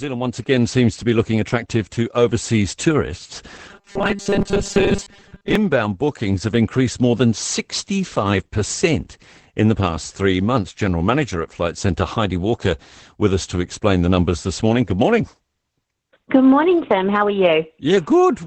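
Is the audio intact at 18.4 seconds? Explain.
No. At 18.4 seconds the speech carries Opus voice compression, present from start to end. The SILK linear-prediction coder models the voice with coarse excitation. The band is held to wideband, with nothing above 8 kHz. The damage is plainly audible. The voice sounds muffled and dull. It is slightly hoarse and robotic. This fits a low bitrate of about 12 kbps.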